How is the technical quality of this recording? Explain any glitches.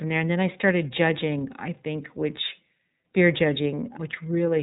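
The quality is limited by iLBC codec damage that runs through the whole recording and is plainly audible. Nothing gets through above about 3.8 kHz, so the speech sounds narrowband and a bit rough and synthetic. iLBC codes each frame's excitation on its own, and the grainy texture fits 30 ms frames at around 13.33 kbps.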